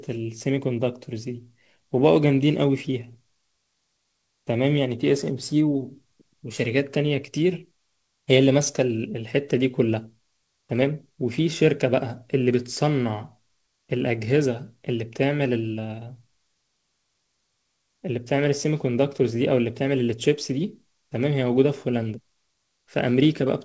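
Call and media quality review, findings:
No faults found in the speech clip; the call path shows only its expected band limit with nothing above 8 kHz, which fits G.722 wideband coding.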